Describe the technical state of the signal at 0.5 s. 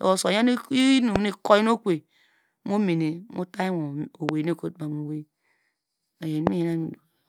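At 0.5 s the speech signal is intact, with no audible technical fault at that moment.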